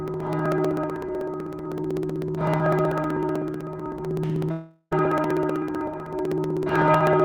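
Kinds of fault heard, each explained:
Periodic USB or driver dropouts: From 0.08 s to the end, a tiny slice of audio is skipped every 63 ms, about 16 times a second. It sounds like a steady ticking during sound, and its strict regularity distinguishes it from random clicks or network glitches.
Long network dropout: From 4.51 to 4.93 s, about 0.4 s of audio is missing. A fading buzz that extends the last sound covers most of it, then about 30 ms of silence follows before the audio resumes. This is likely a long stretch of lost packets.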